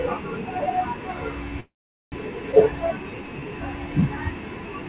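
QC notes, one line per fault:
1.60–2.14 s, call audio freeze: the speech halts for about 0.52 s. The last sound carries on briefly as a fading buzz, then roughly 0.43 s is dead silence. Afterwards the speech resumes exactly where it broke off, with nothing lost. This most likely comes from packets held up in transit until the jitter buffer ran dry. An inserted pause with intact speech after it distinguishes this from a skip.
2.52–2.55 s, skip ahead: the speech jumps forward with almost no break, just a few milliseconds of fill. Roughly a tenth of a second of speech is gone, so the sounds on either side are butted together abruptly. Audio was discarded while later audio was already waiting. The result is missing material and no gap, the reverse of the freeze, which adds a gap and loses nothing.
2.65–3.46 s, jitter buffer slow-down: the speech drags at about 87% speed, with 108 ms added over roughly 0.8 s. 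Sounds are drawn out from single pitch periods being repeated to rebuild the buffer's reserve. Pitch stays the same. No silence appears, which separates it from a freeze. In the narrowband call audio, cut off at 4 kHz, the repeated cycles are heard as smeared, elongated sounds rather than as a gap.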